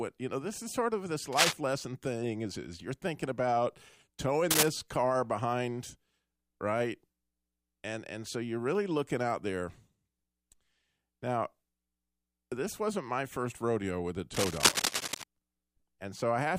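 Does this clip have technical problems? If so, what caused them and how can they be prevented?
Yes. Cable scratch noise appears at 1.33 to 1.53 s, 4.51 to 4.68 s and 14.34 to 15.23 s as bursts of scratching over the speech. The first two are slightly louder than the speech, and the last, longer one is about as loud. This is likely a worn cable or connector being moved, so its contact resistance jumps about rapidly. To prevent it, replace or clean worn leads and plugs and keep cables still while recording.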